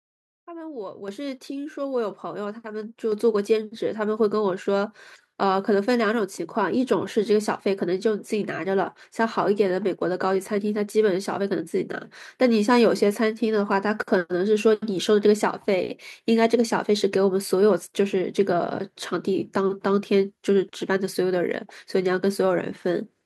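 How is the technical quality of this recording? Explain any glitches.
The recording has one recurring problem: the microphone volume stepped up three times early on, at 1.08 s (about 8 dB), 2.1 s (about 3 dB) and 3.12 s (about 4 dB). Each time the call software judged the input too quiet and raised the device gain in a single jump, so speech and background noise get louder together and stay louder. On a waveform the envelope widens abruptly at each point; a spectrogram shows every band brightening at once.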